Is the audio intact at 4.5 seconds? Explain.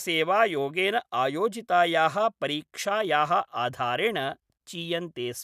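Yes, the audio is intact at 4.5 seconds, with no fault at that moment.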